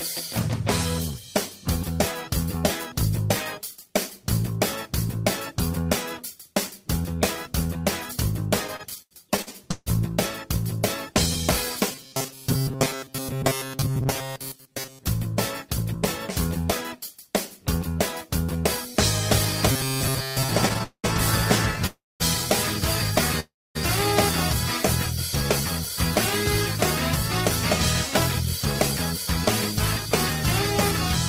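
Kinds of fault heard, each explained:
Repeated stalls (stutter): Late packets drained the jitter buffer again and again, so the last sound was stretched to cover each wait. From 8.67 to 9.88 s nine gaps fill 370 ms, the longest 152 ms. From 20.69 to 21.06 s four gaps fill 230 ms. Nothing is lost, but the audio drags.
Robotic sound from repeated short buffers: A rigid, metallic buzz at 133 Hz sits on the sound from 11.91 to 15.05 s and again from 19.72 to 20.50 s. It likely comes from a short piece of about 7.5 ms being repeated over and over while most of the real audio is skipped.
Jitter buffer speed-up: From 13.98 to 14.68 s, the receiver trims small pitch-period slices to shrink an overfull buffer. Roughly 40 ms is removed, so the audio runs at 104 percent speed. The pitch stays the same.
Call audio freeze: At 21.86 s and again at 23.40 s the sound halts for about 0.34 and 0.35 s. A fading continuation gives way to about 220 and 260 ms of silence. 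Then the audio resumes where it stopped, likely after packets were held up in transit.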